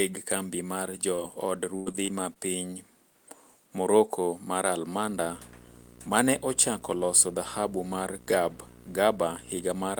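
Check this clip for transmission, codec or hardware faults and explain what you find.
Two transmission faults are audible, both packet-loss related and both early in the speech.

Short concealed packet loss occurs at 1.15–1.20 s, just after "kambi mar jo". About 20 ms of audio failed to reach the decoder in time, and the receiver bridged the hole with roughly 23 ms of synthesized continuation, extending the preceding sound before crossfading back into the real signal. It is heard as a brief smear or wobble rather than a clean dropout.

Repeated packet loss (robotic sound) follows from 1.76 to 2.37 s, just after "kambi mar jo od". Four separate gaps fall inside this 0.6 s stretch, the longest 105 ms, totalling about 160 ms missing and about 155 ms concealed, roughly a quarter of the span. Each gap is patched by extrapolating the last sound, and the next loss arrives before the signal settles, producing a choppy texture with parts of the speech missing.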